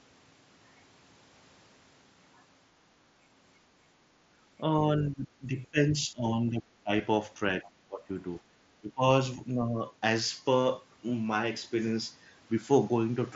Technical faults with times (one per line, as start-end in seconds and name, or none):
4.80-6.91 speech suppressed in double talk
7.62-8.12 speech suppressed in double talk
8.80-9.05 speech suppressed in double talk
9.36-9.80 speech suppressed in double talk